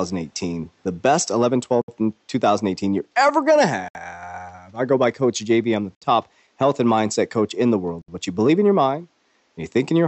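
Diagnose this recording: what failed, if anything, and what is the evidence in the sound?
The failure is at the codec stage: gaps at joins of encoded pieces. Silences of about 67 ms, with smeared edges, cut into the speech every 2.0 s, at 1.82, 3.88 (after "you're ever going to"), 5.95 and 8.02 s. Each separately encoded piece kept its start-up delay and padded last frame untrimmed.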